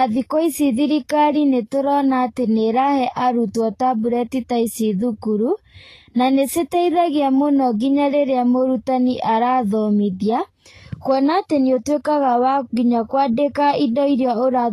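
Throughout, the speech sounds hissy and grainy, with nothing above 14.2 kHz, likely Vorbis compression at a low setting, consistent with roughly 29 kbps.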